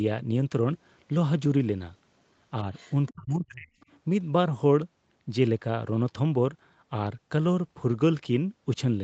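From 2.74 to 3.13 s there's a faint second voice underneath, roughly 25 dB below the speech. That's the other side's voice leaking through, likely loudspeaker echo the canceller didn't fully remove. Right after, from 3.13 to 3.71 s, the speech dips hard, as much as 35 dB for about half a second in total. That's speech suppressed in double talk, likely with the canceller ducking everything while both sides overlapped. A tiny scrap of leaked voice returns at 3.80–3.86 s, around 35 dB down.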